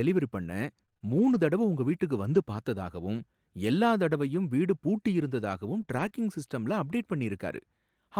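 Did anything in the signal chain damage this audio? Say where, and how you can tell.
Yes, the network path did. Between 0.85 and 2.36 s, just before "பார்த்ததாகவும் எல்லா தடவையும் வீடு", scattered short gaps of around four brief dropouts leave small ticks and smears. The receiver bridged each hole by extending the preceding sound. They stay isolated, unlike a continuous choppy run.

From 5.82 to 6.12 s, right after "தடவையும் வீடு பூட்டி இருந்ததாகவும்", repeated packet loss (robotic sound) sets in. Three gaps, the longest 20 ms, follow in quick succession, and each is patched by continuing the last sound, so 14% of that stretch turns choppy rather than merely ticking.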